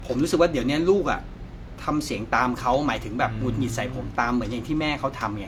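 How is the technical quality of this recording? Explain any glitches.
The recording is held back by one problem that runs the full length. It sounds like low-bitrate audio saved at a high bitrate: the speech keeps the artefacts of a heavy first encode, which fits something like HE-AAC near 40 kbit/s, likely later re-saved as a much larger MP3. The bigger file can't restore what that first pass discarded, and the spectrum stops at 18.5 kHz.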